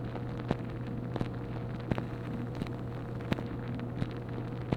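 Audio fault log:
1.93–3.43 s, crude rate conversion: the sample rate was changed by nearest-sample picking, repeating or skipping samples with no anti-aliasing filter, and the pattern fits a change from 44.1 kHz to 48 kHz. The repeat-and-skip pattern cycles at a rate set by the two rates, so the error forms shifted, inharmonic copies of the sound itself. It is heard as a gritty, inharmonic fizz riding on loud and bright moments, sitting roughly 35 dB below the signal.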